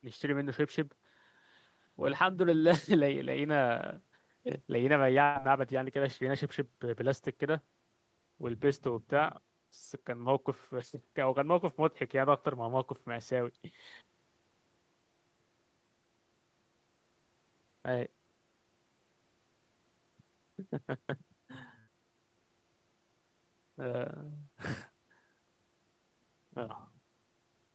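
Bursts of packet loss at 5.23 to 5.38 s and 21.79 to 21.90 s: the receiver stretches and fades the last sound across roughly 120 ms, then 80 ms, before resuming with that audio missing. The sound is band-limited to 8 kHz by the call path.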